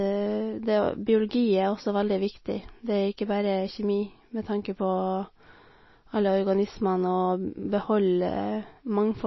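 Speech throughout shows likely MP3 compression at a low bitrate, roughly 24 kbps, cutting everything above 5.8 kHz and leaving a watery, swirling texture with smeared attacks.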